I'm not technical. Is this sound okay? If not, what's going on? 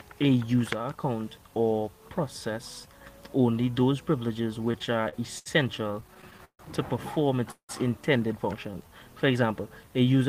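No. Two kinds of fault can be heard.

From 4.71 to 5.48 s, and again from 5.92 to 6.61 s, there are repeated stalls (stutter). The sound keeps catching: about seven, then eight, brief hitches where the last bit of sound is stretched to cover a wait, the longest about 72 ms and then 144 ms. Nothing is lost, but the audio drags and trips over itself. The difference from a freeze is the many small stops in a row.

At 7.51 s there is a single call audio freeze, lasting about 0.2 s. The sound holds its last moment, fades away, and goes fully quiet for about 100 ms before carrying on exactly where it left off, so a pause has been inserted rather than anything removed. The likely cause is a batch of data held up in transit, leaving the receiver briefly with nothing to play. Unlike the stutter, it is one clean stop, not a chain of hiccups.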